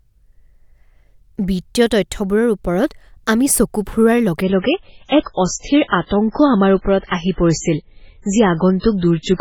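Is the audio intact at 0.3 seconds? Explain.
Yes, the speech at 0.3 seconds is intact, with no audible fault at that moment.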